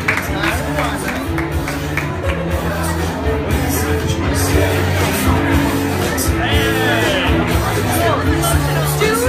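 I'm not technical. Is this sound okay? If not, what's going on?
Yes, this one's fine; nothing in it sounds broken or out of place, so there's nothing to worry about.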